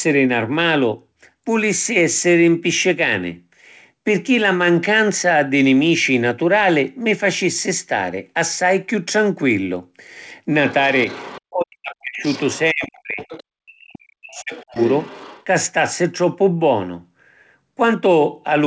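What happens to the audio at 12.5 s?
From 12.26 to 12.59 s, the other side's voice leaks through, roughly 20 dB under the talker, likely loudspeaker echo the canceller missed. It's a separate voice, not the talker's own repeated.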